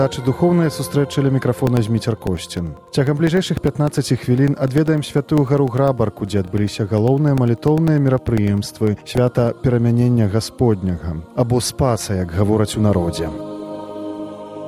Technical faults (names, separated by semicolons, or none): periodic USB or driver dropouts